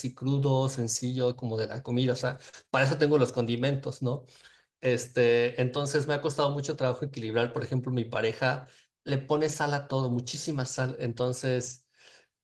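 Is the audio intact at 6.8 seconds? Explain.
Yes, the speech at 6.8 seconds is intact, with no dropout, click, glitch or other fault at that moment.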